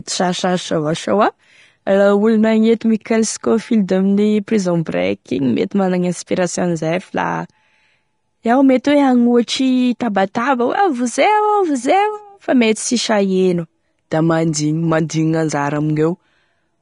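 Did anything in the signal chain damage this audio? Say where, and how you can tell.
Yes. The codec stage likely applied low-rate Vorbis compression, fitting a bitrate around 34 kbps: the speech has nothing above 10.6 kHz, and its coarsely quantised treble sounds hissy and grainy throughout.

Codec pre-echo at 10.34 s: quantisation noise spread across a whole block leaks about 14 ms ahead of a sharp attack, a brief hiss that smears its onset.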